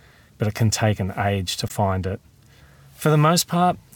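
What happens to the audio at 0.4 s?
Nothing goes wrong at 0.4 s; the audio plays through that moment intact, with no dropout, click or distortion.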